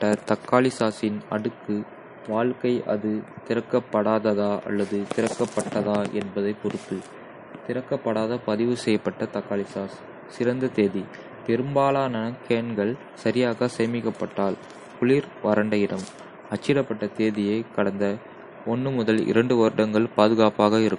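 The whole clip carries plainly audible damage that's likely MP3 compression: nothing above 10.6 kHz, watery swirl on the speech, pointing to a starved bitrate around 40 kbps.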